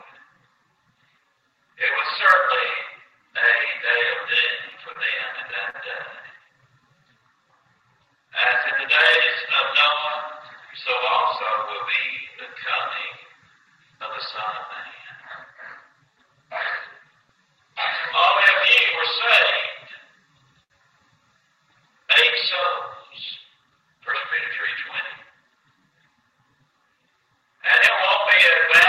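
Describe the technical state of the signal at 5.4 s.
At 5.4 s you're inside a run of repeated stalls (stutter) from 4.71 to 5.76 s: late packets drained the jitter buffer four times, and the receiver stretched the last sound over gaps of up to 41 ms, so it drags without losing anything.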